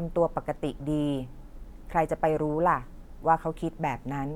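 No technical faults are audible anywhere in the speech recording.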